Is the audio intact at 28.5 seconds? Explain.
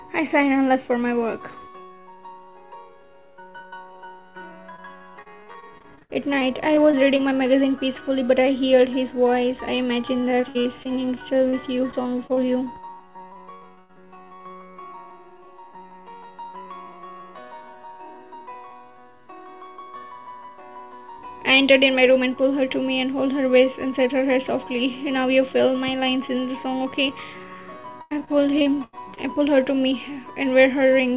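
No. Repeated packet loss from 28.02 to 29.19 s left seven gaps, the longest 92 ms, each patched by extending the last sound, so the audio turns choppy and robotic.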